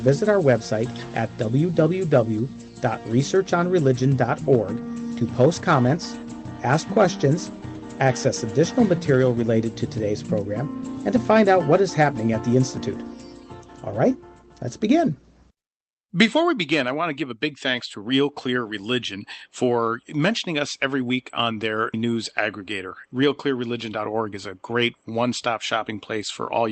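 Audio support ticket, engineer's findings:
No faults found: signal continuous and stable in level and timing, with content topping out around 8 kHz, which fits an Opus-coded call path operating at its configured bandwidth.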